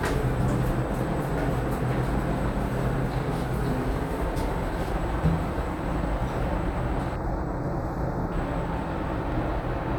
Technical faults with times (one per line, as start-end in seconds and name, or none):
7.16-8.32 channel delay (comb filtering)